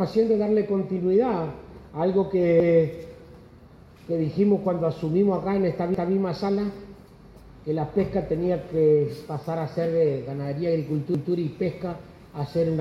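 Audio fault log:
2.60 s, 5.94 s and 11.15 s: repeated buffer. Each time a 0.19 s stretch plays twice, with a hard join at the repeat. That length fits an 8192-sample buffer, replayed when fresh data arrived late. Unlike a dropout, there's no gap, and little or nothing appears lost, just a doubled stutter.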